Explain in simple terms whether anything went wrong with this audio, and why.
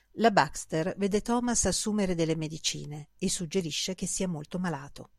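Listening to the speech, nothing went wrong that can be heard: no fault or glitch stood out anywhere in the recording.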